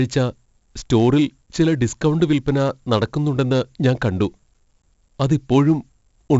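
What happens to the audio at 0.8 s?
At 0.8 s the speech carries 4-bit ADPCM compression, present across the whole clip. Each sample is coded as a coarse adaptive step from a prediction, leaving heavy gritty hiss that tracks loudness and smeared attacks. Nothing remains above 7.7 kHz, which fits a 64 kbps stream.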